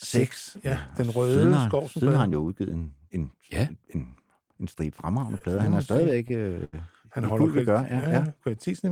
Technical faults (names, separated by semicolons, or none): repeated stalls (stutter); jitter buffer slow-down